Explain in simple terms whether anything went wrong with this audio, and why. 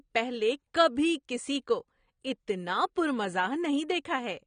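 The recording was likely squeezed by AAC compression at a low quality setting, which throws away detail to save space. Throughout the speech, nothing is heard above about 9.7 kHz, so it sounds dull and muffled, with a plainly audible smeary, fizzy edge on hissy sounds.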